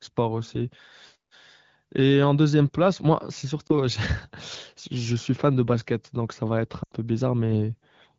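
Speech with two lost AMR speech frame events. At 3.67 to 3.71 s a brief dip or warble points to a single lost frame. At 6.84 to 6.92 s, roughly four frames go missing: the decoder extends the last good pitch and vocal tract settings with falling gain, dropping the sound to near silence within two frames.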